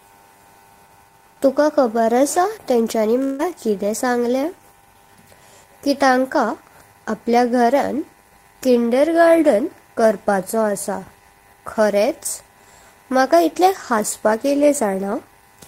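At 3.23 s the speech breaks off, and for about 155 ms you hear the last sound smeared out into a buzzy, fading tail instead of real audio. It never quite drops to silence before normal sound picks up again at 3.42 s, and roughly 160 ms of the speech is simply gone. That's the classic signature of a long network dropout, likely the stream stalling while the receiver papered over the gap.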